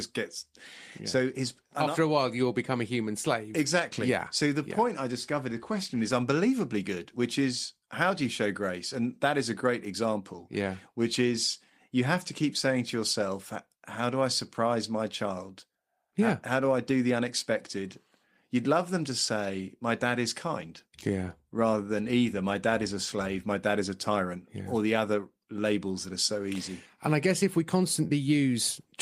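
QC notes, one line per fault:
Nothing stood out on listening to this speech clip.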